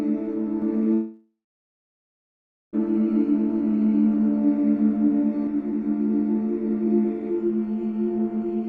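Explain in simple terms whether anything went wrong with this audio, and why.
Two things went wrong here. First, from 0.62 to 5.47 s there's a doubled audio track: a second copy of the sound runs about 0.15 s behind the first, at roughly the same loudness, so everything gets a flat, slappy echo that switches on and off abruptly. That's likely a slower second recording path or an editing slip.

Second, a long network dropout hits at 0.93 s. The last bit of sound smears into a fading buzz for a few tenths of a second, then goes silent until 2.75 s, when the audio resumes with about 1.8 s simply missing, likely because the data never arrived.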